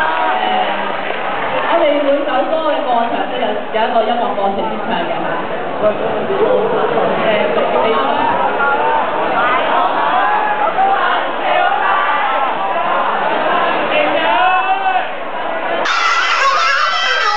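At 15.85 s the last stretch of the clip suddenly jumps into a section at the wrong speed, running to the end. It plays back about 1.84 times faster than it should, so everything sounds hurried and shoots up in pitch by roughly ten semitones, with speed and pitch shifting together. That's likely a clock mismatch, where an editor or player handled that segment at the wrong rate.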